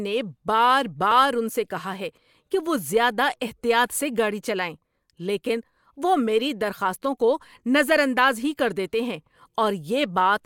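No technical faults can be heard anywhere in the speech. There is nothing here that points to a problem in how the audio was captured, processed or delivered.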